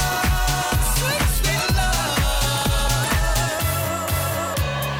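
At 3.08 s, compressed frames skipped: about one frame, roughly 20 ms, drops out, so the audio jumps ahead, leaving a brief vertical discontinuity on the spectrogram.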